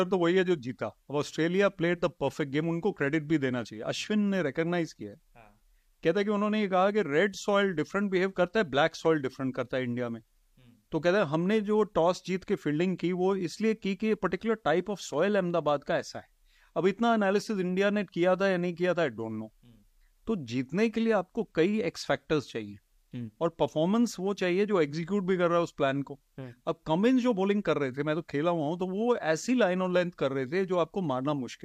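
No technical faults occur at any point in the speech.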